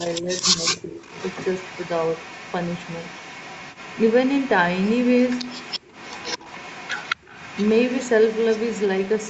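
Speech suppressed in double talk, from 0.0 to 0.32 s and again from 0.54 to 1.02 s: the talker's level dips sharply while the far side is also talking, by roughly 15 dB in the first stretch and around 20 dB in the second. This is likely an echo canceller that could not tell the near talker from the loudspeaker echo during overlap and turned both down.

Echo leak, from 0.08 to 0.45 s, then almost continuously from 1.02 to 4.51 s and from 4.76 s to the end: a faint copy of the voice trails the original by 220 ms, at about 15 dB below the speech at first and about 20 dB below it afterwards. It sounds like a delayed shadow of the voice, likely echo from a loudspeaker that the canceller failed to remove and sent back. The whole clip, including the echo, stops at 8 kHz, as expected for the Opus call path.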